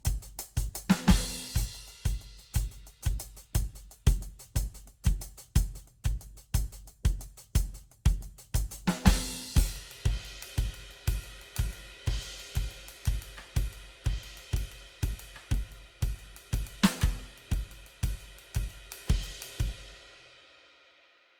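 It's a music clip with generation loss from start to finish: a swirly, hollow, smeared sound with soft, blurred attacks, more than one encode explains. It likely comes from around seven passes through Opus, at what sounds like 64 kbit/s, each re-quantising the damage from the last.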